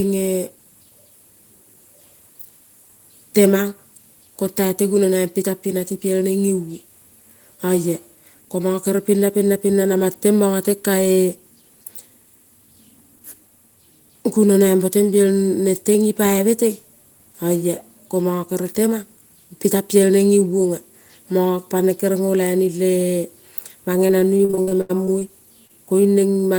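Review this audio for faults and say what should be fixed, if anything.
From 24.07 to 25.23 s there is repeated packet loss (robotic sound): ten gaps, about 320 ms of audio missing, the longest 80 ms. The receiver patched each hole by extending the preceding sound, so about 27% of that stretch is concealment and the speech turns choppy. On a spectrogram the harmonics appear as flat, smeared bands stretched across the gaps. In the waveform, copied segments alternate with abrupt joins. A larger jitter buffer and forward error correction on the sending side would prevent it.

At 25.67–25.71 s there is a short concealed packet loss. About 20 ms of audio never arrived in time, and the decoder filled it by continuing the last sound before blending back into the real signal. It is heard as a brief smear or wobble. On a spectrogram it shows as a thin, blurred vertical strip where fine detail is missing. 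The same buffering and redundancy measures would prevent it.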